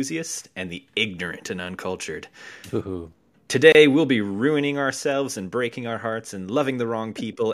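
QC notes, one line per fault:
3.72–3.75 s, gap at a join of encoded pieces: separately encoded segments were joined untrimmed, leaving 26.5 ms of delay and padding silence before speech resumes on "we'll be ruining ourselves".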